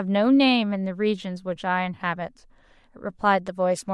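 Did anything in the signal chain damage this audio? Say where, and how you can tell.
Yes. Throughout the speech there is a plainly audible breathy, grainy edge on the upper frequencies, with the top band sounding noise-filled rather than detailed. This is likely Bluetooth LC3 compression at the codec stage, consistent with roughly 48 kbps and 10 ms frames, where sparse high bands are replaced with shaped noise.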